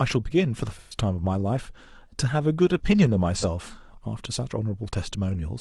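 Around 0.79 to 0.98 s there's AAC frame loss with concealment: roughly 128 ms of the speech goes smeary and a bit phasey as the decoder rebuilds it from the last good spectrum, which points to about three frames going missing. A shorter blip follows at 3.36 to 3.44 s, about 43 ms, consistent with a single lost frame, heard as a brief noisy smudge.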